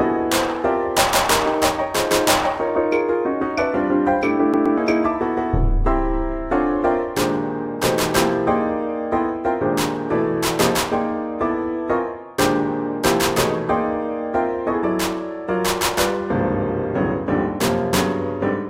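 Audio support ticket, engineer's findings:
CD stuck on one turn, 4.53 to 4.78 s. A slice of about 121 ms plays twice in a row, with a brief mute at each jump. Fast, even stutter. Probable component: disc or laser pickup. A scratch sends the laser back one track on each turn.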